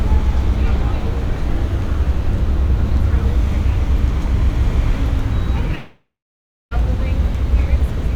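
At 5.75 s the sound cuts out, and it does not properly return until 6.74 s. For the first few tenths of a second, the last bit of audio seems stretched into a fading buzz. Then about 0.6 s of silence follows. When the sound resumes, roughly a second of it is simply gone. This is a long network dropout. Audio likely stopped arriving, and the receiver bridged the gap with invented filler before giving up.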